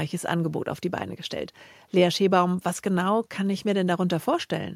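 A short piece of speech with nothing technically wrong to point out anywhere along the way.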